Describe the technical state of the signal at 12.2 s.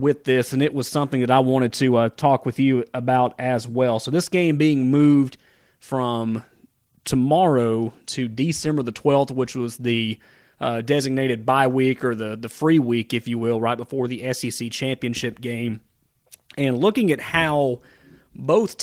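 At 12.2 s the speech signal is intact, with no audible fault present at that moment.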